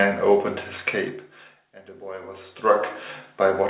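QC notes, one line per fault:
No faults found.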